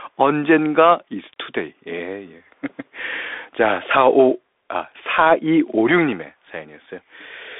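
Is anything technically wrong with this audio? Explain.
Yes. Bluetooth CVSD headset codec throughout: one-bit delta coding, fitting a 64 kbps link, leaves nothing above 3.8 kHz, making s sounds scratchy over granular hiss.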